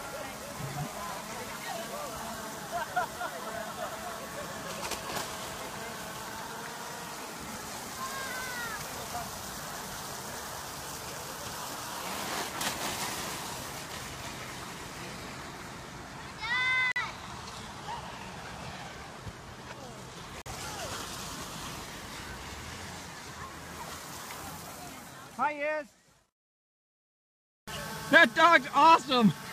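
At 16.92 s the sound cuts to silence until 17.01 s, and again from 20.42 s to 20.50 s. Both are digital broadcast dropouts. The receiver lost the signal or rejected a corrupt frame and muted until a valid frame arrived. Each hole removes about 43 ms of programme, which fits a single lost frame, and the brief mute around it makes the gap audible as an abrupt short hole before the audio resumes further on.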